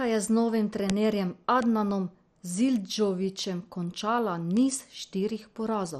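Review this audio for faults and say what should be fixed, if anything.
The speech sounds dull and gurgling throughout, with nothing above 13.2 kHz. This is likely heavy MP2 compression: upper sub-bands are switched off and the rest coarsely quantised, consistent with roughly 56 kbps. Encode at a higher bitrate or work from a lossless source.

Sharp, broadband ticks at 0.90, 1.62, 2.76 and 4.57 s are bit error spikes, where flipped bits jump one or a few samples by a power of two before returning. Use error-checked storage and transfer, and interpolate over these samples to repair this copy.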